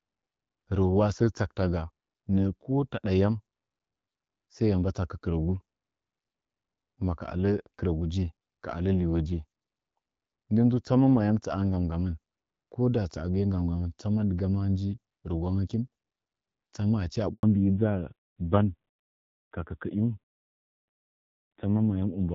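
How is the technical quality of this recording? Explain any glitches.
The recording is a phone call with two linked problems near the end. Up to that point the sound carries the light coding texture of HD Voice, which fits AMR-WB running at around 12.65 kbit/s.

A handover gap runs from 17.33 to 17.43 s. The call switched networks and no frames arrived for 100 ms, so the audio fades out within a few tens of milliseconds and stays silent. Unlike ordinary packet loss, there is no concealment buzz, only a clean hole.

A fallback to narrowband starts right after the gap, at 17.43 s, and lasts to the end. The call renegotiated onto an older codec, consistent with AMR-NB at about 7.4 kbit/s. Nothing above 4 kHz remains, and the sound turns dull and rougher. It differs from a simple low-pass filter because the drop coincides with the handover and adds coarser coding grit.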